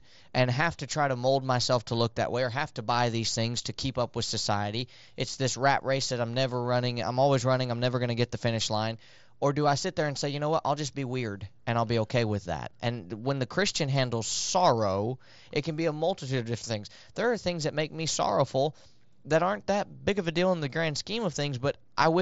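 Nothing goes wrong in this bit of speech; it comes over a Bluetooth mSBC headset link doing its ordinary job, so the sound tops out around 7.7 kHz.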